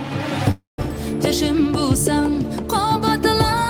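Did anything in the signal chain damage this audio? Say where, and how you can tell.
Yes. A call audio freeze, likely from network packets arriving late and draining the jitter buffer, runs from 0.51 to 0.80 s. A fading buzz gives way to about 160 ms of silence. Then the audio resumes intact but roughly 270 ms late. On a spectrogram, smeared bands fade into a blank column.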